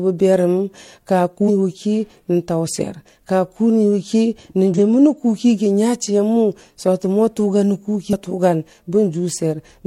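A speech recording with one fault: a brief burst of damaged data in the compressed stream from 4.74 to 4.78 s. For about 40 ms the decoder is handed corrupted frames it cannot read properly, so it loses sync and hunts for the next valid frame header, producing a short garbled blip. Unlike a plain dropout or a clean click, this comes from the decoder misreading bad bytes in the compressed data.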